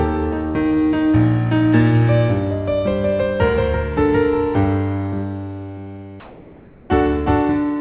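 From 6.2 to 6.89 s, the sender likely stopped transmitting and the receiver substituted comfort noise in place of the background: a flat, featureless hiss about 2 dB quieter, band-limited to 4 kHz like the call path.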